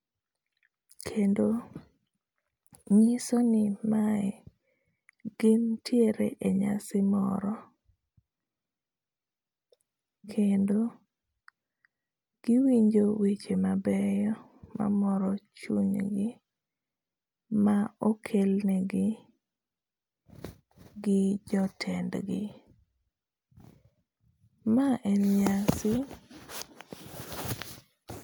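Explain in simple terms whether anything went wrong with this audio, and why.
Nothing went wrong here: the speech comes through steady and even the whole way, with nothing odd to point to at any moment.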